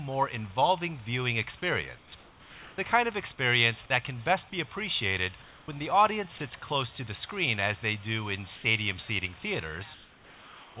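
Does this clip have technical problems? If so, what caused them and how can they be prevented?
Yes. Comfort noise in place of the background occurs at 1.98–2.12 s, 2.2–2.78 s, 5.42–5.68 s, 8.56–8.64 s and 9.94–10.76 s. The quiet background, about 25 dB below the loud parts, turns into a flat, textureless hiss. It is mostly a little quieter, by up to about 6 dB, and is about 1 dB louder at 8.56 s. The likely cause is discontinuous transmission: the sender stopped sending during pauses, and the receiver synthesised noise to fill them. Above the hiss, nothing passes 4 kHz, which fits the G.711 call codec. To prevent it, disable discontinuous transmission or voice activity detection on the sending side so that the real background is carried through the pauses.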